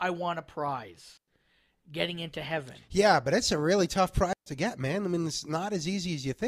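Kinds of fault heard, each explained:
Digital wireless dropout: the wireless link lost too much data, so the receiver muted with a very fast fade. The speech has two clean gaps of near silence, 0.10 s at 1.17 s and 0.13 s at 4.33 s, with no noise burst around them.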